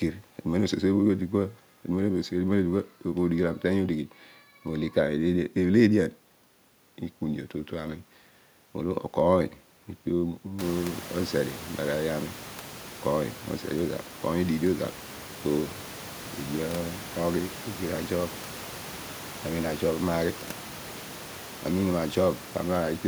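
No technical faults are present in the speech; the only change is a rise of about 22 dB in the room's own background noise just after 10 s, which then sits about 17 dB below the speech.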